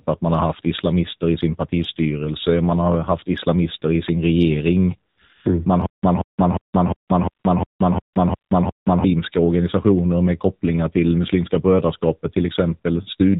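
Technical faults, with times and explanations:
Throughout: AMR narrowband mobile codec. The speech was squeezed through the AMR-NB phone codec at about 7.4 kbps, which resamples to 8 kHz and rebuilds the voice from a vocal-tract model excited by a handful of pulses per 5 ms subframe. Nothing above 4 kHz survives, so sibilants and airiness vanish, and at this low rate the damage is plainly audible as a buzzy, synthetic, boxed-in voice.
5.12 to 5.18 s, 7.08 s, 7.30 to 7.44 s, 8.14 s, 8.36 to 8.50 s: AMR comfort noise. The sending side decided nobody was talking and stopped transmitting speech frames for stretches of 20 to 140 ms. The first comes just after "islamister i sin regering". The receiver patched each gap with generated noise shaped only from a rough level and spectrum estimate, so the real background drops out and a smooth, even hiss switches in briefly.
5.86 to 9.04 s: stutter with silent gaps. 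Playback stalled, most likely a starved stream or player buffer, and each retry replayed the last fragment before running dry. A 180 ms burst repeats nine times at a steady 354 ms period, each followed by about 175 ms of dead digital silence, giving a mechanical stutter. The audio that belonged in this span is lost, and normal playback resumes with "organisationer med kopplingar till".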